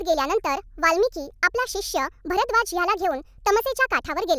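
From start to end, the speech plays too fast and too high. This is a wrong sample rate fault. The audio runs 1.45 times too fast with no conversion, raising pitch about 6.45 semitones. That fits 22 kHz audio played at 32 kHz. Voices sound chipmunk-like and rushed.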